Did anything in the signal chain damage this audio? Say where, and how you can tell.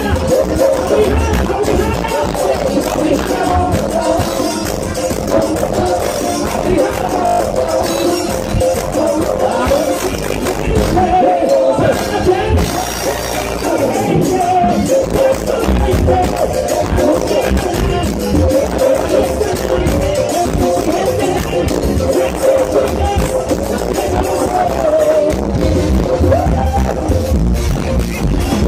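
Yes, at the driver and buffer stage. From 7.26 to 7.4 s there's a system hang loop: one 20 ms slice repeats seven times, giving a brief 50 Hz buzz. The host stalled while the hardware kept replaying its ring buffer, so roughly 150 ms of audio vanished.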